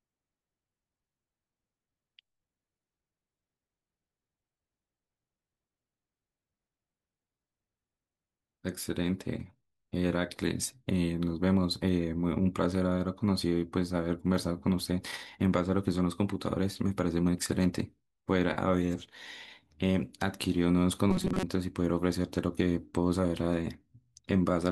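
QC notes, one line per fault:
21.11–21.43 s, robotic sound from repeated short buffers: the speech turns into a rigid, metallic buzz pitched at 188 Hz that still loosely follows the syllables, with roughly half of this stretch made of repeats instead of new audio. The likely cause is audio arriving too late and the gap being filled by looping a segment of about 5.3 ms, which fits that pitch. A spectrogram shows flat, evenly spaced harmonics at multiples of 188 Hz, and the waveform shows identical short cycles repeating.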